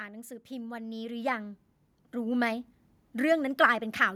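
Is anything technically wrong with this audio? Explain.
Yes, there's an automatic gain rising fault here. From about 0.48 s to 2.76 s the level climbs steadily by about 9 dB. What's happening is the AGC decided the input was too quiet and kept nudging its gain up over those couple of seconds. Because it's turning up the whole signal, the speech and the background noise swell together, so you hear the room creep up right alongside the talker rather than just the speech getting louder.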